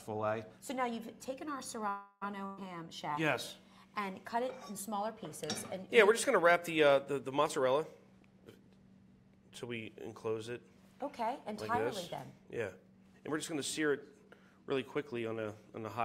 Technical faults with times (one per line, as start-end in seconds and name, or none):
1.89-2.23 call audio freeze
2.45-2.59 burst of packet loss
7.48-8.49 jitter buffer speed-up
12.31-15.13 jitter buffer speed-up